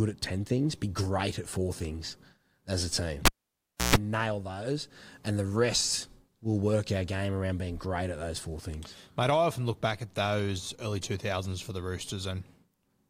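Right after "four things as a", at 3.25 s, there's a classic cable pulled and plugged in moment. A pop marks the connector coming out, then the sound drops to near silence for about 650 ms. As the plug goes back in, the tip touches first and picks up a 60 Hz mains buzz lasting 130 ms. The full seating brings a second pop, and the sound returns around 3.95 s.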